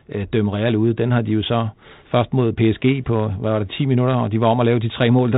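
Nothing stood out on listening to this speech, which carries the narrow telephone-band character of 32 kbit/s G.726 coding.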